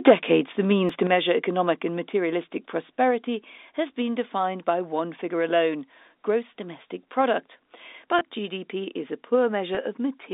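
The clip is telephone-band speech carried over G.711 A-law, with nothing above about 3.7 kHz. The microphone's input gain was likely set too high, so peaks drove past the converter's limit: from 0.07 to 0.12 s by about 5 dB, with a sizeable share of samples flattened, and again from 0.71 to 0.73 s by about 1 dB. The cut-off tops give those syllables a harsh, crackly edge. In response, the call software likely turned the microphone volume down in steps. Voice and background drop abruptly by about 2 dB at 0.08 s, about 6 dB at 1.07 s, about 2 dB at 2.09 s just after "to measure economic and", and about 2 dB again at 3.11 s. At 0.89 s the program likely failed to collect its samples in time, so a dropped buffer (overrun) removed roughly 10 ms of audio. The two sides are spliced together with a jump, right before "to measure economic and". Finally, packet loss with pitch repetition occurs from 8.19 to 8.21 s and from 9.75 to 9.77 s. 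Each gap is 20 ms, which fits one lost packet, and the receiver filled it by repeating the last pitch period, producing a brief buzzy, held sound.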